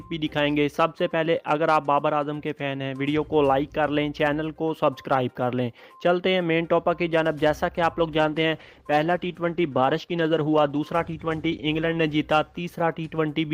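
From 8.04 s to 13.09 s the audio goes through a call bitrate drop. The connection's bandwidth estimate fell, so the encoder was pushed to spend far fewer bits and began coding the signal much more coarsely. The rougher, degraded texture fits a fall from around 48 kbps to around 17 kbps. The worst stretch lasts about 4 s before the rate climbs back near the end of the clip.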